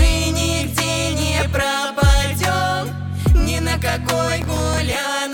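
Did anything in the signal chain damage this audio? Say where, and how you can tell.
Yes. From 4.42 to 4.78 s a burst of gritty, tearing crackle rides on the sound and then stops cleanly. This is processor overload crackle at the driver or buffer stage. The processor repeatedly failed to deliver very short buffers, around a millisecond and a half each, on time. Each miss repeated a scrap of old audio with hard edges. More than a dozen misses fused into the crackle.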